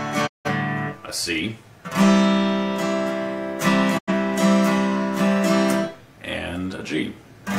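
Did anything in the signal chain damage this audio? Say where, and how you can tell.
Yes, a digital broadcast dropout at the reception stage: the audio fades out over 20 ms and goes silent at 0.26–0.48 s and 3.97–4.11 s. The receiver muted on failed frames, which fits roughly four and two lost frames. The waveform shows flat gaps, and the spectrogram shows blank vertical bands.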